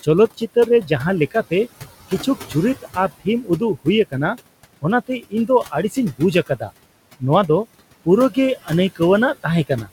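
From the start, noise suppressor artifacts run throughout. The room noise, which sits about 17 dB below the speech, is pushed down by about 19 dB between phrases, so the floor pumps. On a spectrogram this shows as mottled, flickering background patches.

Speech cut by the noise suppressor occurs at 0.03–0.91 s, 2.09–4.14 s, 4.82–6.7 s, 8.05–9.0 s and 9.43–9.89 s. Within each span, brief stretches totalling roughly a tenth to under half a second lose about 13 to 19 dB, so soft consonants and endings sound swallowed. These show as sudden waveform dips and faded high-frequency energy in the spectrogram.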